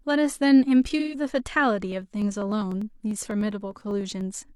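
Speech clip with two faults. From 0.99 to 1.15 s, AAC frame loss with concealment smears about 128 ms into a noisy, phasey patch, a blurred spectrogram block consistent with roughly three lost frames. From 1.92 to 4.51 s, periodic USB or driver dropouts skip about half a millisecond every 0.1 s, producing ticks and evenly spaced vertical waveform discontinuities.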